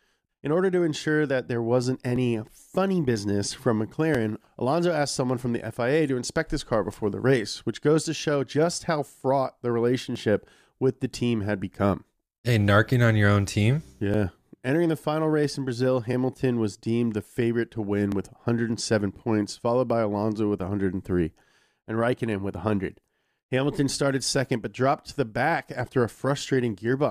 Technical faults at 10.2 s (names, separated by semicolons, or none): overlap between stream segments